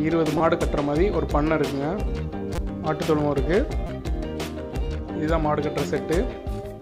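Repeated buffer at 0.38–0.40 s, 2.55–2.58 s and 3.87–3.89 s: each time new audio missed its deadline, so the device replayed the last 5.8 ms block, which fits a 256-sample buffer, four extra times. The hard joins between these tiny identical slices produce a brief buzzy click rather than an audible stutter, and the sound resumes about 20 ms further on than it should.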